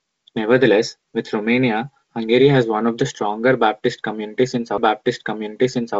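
At 4.78 s, just after "one of the stronger", there is a CD skip: a knock or a disc flaw made the pickup jump its track and land on a different turn of the disc's spiral. Playback drops out for only a few milliseconds, heard as a small tick, then resumes at another point in the recording, so the sound lurches discontinuously. On the waveform this is a brief flat gap followed by a mismatched join. A spectrogram shows a thin vertical broadband line, with the G.722 wideband band limit still visible as empty space above about 7.8 kHz.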